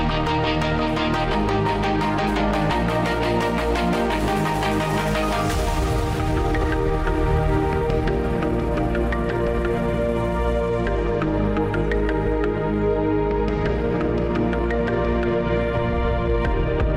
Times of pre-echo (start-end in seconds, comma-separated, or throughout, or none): none